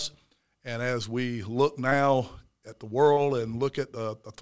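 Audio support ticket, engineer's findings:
Short concealed packet loss, two events: 1.90–1.93 s after "as we look", 3.13–3.20 s after "at the". About 20 ms and 40 ms of audio lost, synthesised from preceding sound, then crossfaded back. Brief smear/wobble. Jitter buffer/PLC in the G.722 path, band ending at 8 kHz.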